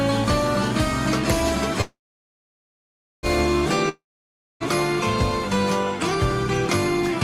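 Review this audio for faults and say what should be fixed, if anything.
A call audio freeze runs from 1.81 to 3.26 s. The last sound is stretched into a fading buzz that falls silent for about 1.29 s. Nothing is lost. The audio resumes where it stopped, now 1.4 s late. A jitter buffer that likely ran empty while packets were held up explains this. A larger adaptive jitter buffer with faster catch-up would help.

A long network dropout follows from 3.89 to 4.63 s. A short fading fill gives way to about 0.61 s of silence. When sound returns, 0.72 s of audio is missing. Packets were likely lost outright. Forward error correction or redundant packets would prevent this.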